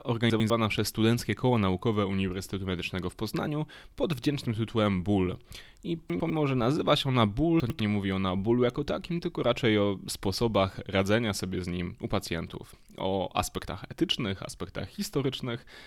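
Three brief jumbled moments break up this speech clip, at 0.3 to 0.5 s, 6.1 to 6.3 s and 7.6 to 7.8 s, each a garbled stumble. These are chunks out of order: in each spot a 100 ms block of audio arrived or was written one chunk late, so it plays just after the block that should follow it. Nothing goes missing, but the swapped pair creates three hard joins.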